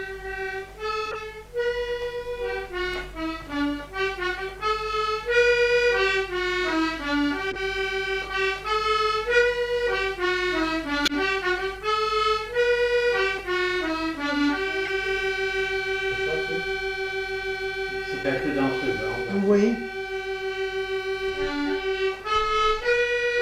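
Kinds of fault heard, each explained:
Corrupt frame decoded: damaged frames played anyway give six short chirps or noise bursts; unlike a dropout, energy appears at wrong frequencies instead of silence.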